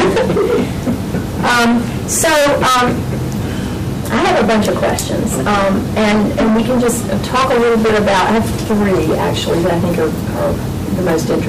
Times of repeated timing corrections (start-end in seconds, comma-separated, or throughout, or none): none